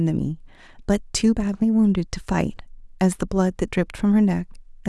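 A short bit of speech, and nothing technically wrong turns up anywhere in it, so there's no fault here to time or trace back to a cause.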